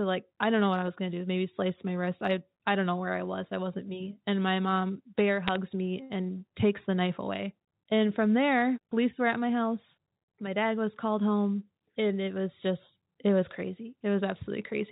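Bits flipped on the digital phone line between 5.48 and 5.56 s, just after "my mom bear" and before "me and takes the". Each flipped bit corrupts a single sample of the 8 kHz telephone signal, and hits on sign or high-order bits jump the waveform far from its true value. Over those 80 ms this produces a short burst of sharp ticks and crackle over unchanged speech. The density of ticks suggests an error rate of about 0.2 percent, spread across five frames.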